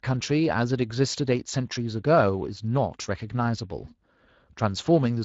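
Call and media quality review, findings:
Speech noisy and hoarse for the whole clip, plainly audible. Component: Speex codec. Mechanism: CELP encoding with too few bits for the excitation signal, roughening the voice; damage level fits a mid setting around 20 kbps.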